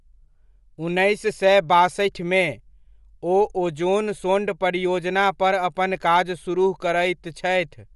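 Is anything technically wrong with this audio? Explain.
Yes. Bluetooth LC3 compression runs through the whole clip. Nothing in the speech reaches above about 11.5 kHz, and the upper band has a breathy, grainy texture with plainly audible codec damage. The likely cause is the LC3 transform codec used by Bluetooth LE Audio. Its coarse quantisation fits a rate near 48 kbps with 10 ms frames: the top of the spectrum is cut off, and the thinned detail below it is partly filled with noise instead of the original content.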